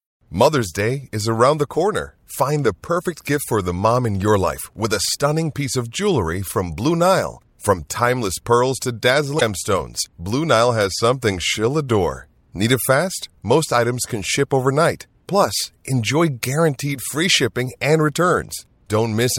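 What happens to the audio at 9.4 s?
A burst of damaged data in the compressed stream hits at 9.37 to 9.42 s. The decoder misreads the corrupted frames and loses sync, producing a brief chirp, squawk, click or short hole.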